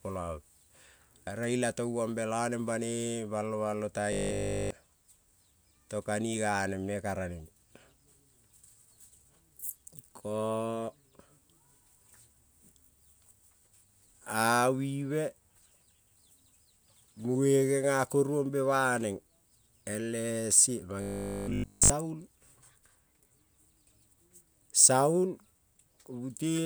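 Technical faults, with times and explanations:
4.13 to 4.71 s, just after "balo balo", robotic sound from repeated short buffers: new audio likely stopped arriving in time, so the same short slice was replayed across the entire stretch. The repeats impose a rigid 50 Hz metallic buzz, which fits a 20 ms buffer.
21.02 to 21.92 s, robotic sound from repeated short buffers: playback likely ran dry again, and a brief slice looped for the whole 0.9 s while the real audio was skipped. The sound becomes a fixed 50 Hz mechanical drone.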